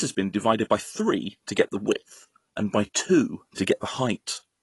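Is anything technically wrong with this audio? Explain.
Yes. Throughout, the speech sounds dull and smeared with a fizzy, warbling edge, and nothing reaches above 11.5 kHz. That is likely AAC compression, consistent with roughly 32 kbps AAC-LC starving the upper bands.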